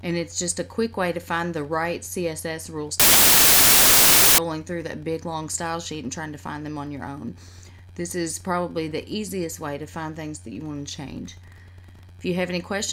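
From 3.00 s to 4.38 s the audio collapses into loud, harsh broadband noise: samples built from the wrong bytes. The reader has assembled each sample's bytes out of order or off by one, so the rapidly changing low bits become the dominant part of every value. Unlike clipping or ordinary distortion, nothing of the original shape survives.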